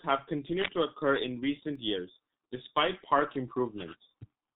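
Throughout, the speech passes through the G.723.1 codec at heavy damage, consistent with a rate near 6.3 kbit/s. Its coarse 30 ms frames and slowly updated voice model blur the sound, and the codec leaves nothing above 3.8 kHz, so the speech sounds muffled and hoarse, with smeared consonants.

Between 1.39 and 1.75 s, CD scratch ticks appear. A blemish on the disc spoils more data than error correction can rebuild, so the player patches over the gap. This produces three brief ticks, each under a millisecond, repeating with the disc's rotation.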